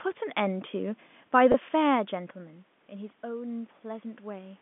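A short speech clip over a telephone-band line, with one glitch: packet loss with pitch repetition at 1.52 to 1.54 s. About 20 ms of audio drops out, consistent with a single lost packet, and the receiver fills the hole by repeating the last pitch period, so you hear a brief held, slightly buzzy smear before the speech picks back up.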